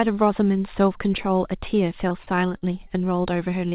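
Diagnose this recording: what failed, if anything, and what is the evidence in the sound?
The network failed repeatedly from 1.94 to 2.91 s, causing repeated packet loss with a robotic sound. Seven holes, the longest 42 ms, drop about 80 ms of speech. The receiver patches each by continuing the previous sound, so the speech turns choppy.

A short concealed packet loss also occurs at 3.69 to 3.73 s, again at the network stage. About 20 ms never arrived. The decoder extended the preceding sound and blended back, leaving a brief smear. The band stops at 4 kHz, which fits the G.711 call path.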